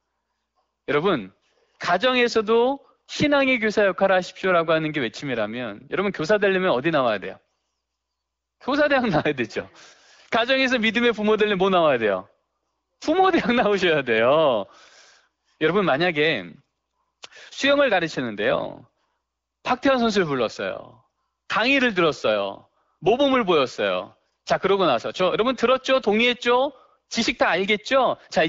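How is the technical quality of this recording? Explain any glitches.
Nothing in this speech recording stood out as a glitch on listening.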